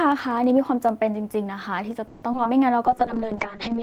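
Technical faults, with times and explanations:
0.06 to 1.91 s, periodic USB or driver dropouts: tiny slivers, roughly a tenth of a millisecond, skipped every 64 ms, giving evenly spaced ticks over the speech, unlike random packet gaps.
2.07 to 2.47 s, repeated packet loss (robotic sound): four holes, the longest 150 ms, mostly patched by stretching earlier sound, so speech turns choppy with pieces missing rather than ticking regularly.
2.86 to 3.82 s, call bitrate drop: the encoder falls from 32 to 6 kbps and bandwidth narrows from 20 to 8 kHz, leaving speech muffled and watery without any gaps.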